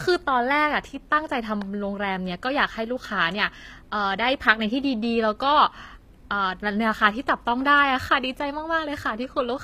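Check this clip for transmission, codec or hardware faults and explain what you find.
One codec fault runs through the whole recording. The speech carries plainly audible HE-AAC compression damage from start to finish. Nothing is left above 15.4 kHz. The upper band is likely rebuilt by spectral band replication, which fits a low bitrate of about 24 kbps. Lower bands are copied upward under a coarse envelope. The treble reaches higher than plain AAC would at this bitrate but is not the original, so harmonics fail to line up across the crossover. S sounds come out gritty, metallic or lispy.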